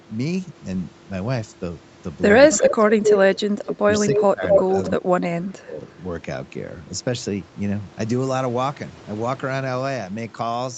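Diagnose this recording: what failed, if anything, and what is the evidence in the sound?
Delayed copies of the speech return at 2.5–2.74, 3.05–3.18, 3.65–3.75, 4.0–4.21 and 4.5–4.91 s. They trail by about 250 ms and sometimes match the talker's level. This echo leak in the call-processing stage is likely a loudspeaker-side echo canceller passing its microphone pickup back.

The talker's speech sinks sharply, by up to about 20 dB, at 2.65–3.04, 4.16–4.55 and 4.93–5.81 s, the first two overlapping the echo bursts. This is speech suppressed in double talk. The echo canceller likely could not separate the talker from the echo and turned both down.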